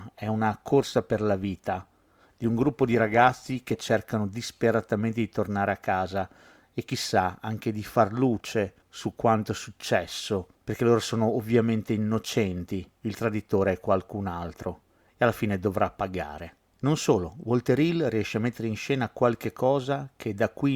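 Adaptive stream starting at a low bitrate, from 0.0 to 4.0 s of this speech: the player opened on a cheap rendition, so treble is thin and artefacts stronger, which fits roughly 24 kbit/s Opus, then jumps cleanly, without a gap, to a fuller rendition near 64 kbit/s.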